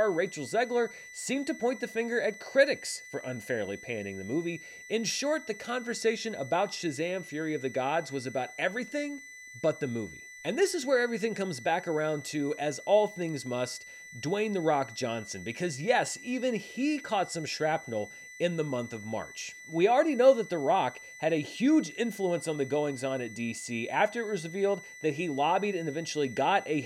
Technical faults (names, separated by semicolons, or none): switching supply whistle